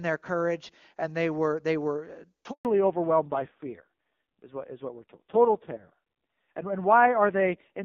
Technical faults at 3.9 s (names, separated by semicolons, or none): fallback to narrowband